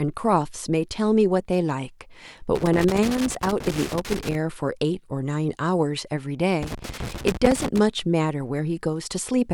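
Loose connector crackle runs from 2.55 to 4.35 s and again from 6.63 to 7.79 s in this speech. A worn or dirty contact keeps opening and closing as it shifts, chopping the signal, so each stretch becomes an irregular burst of scratchy crackle.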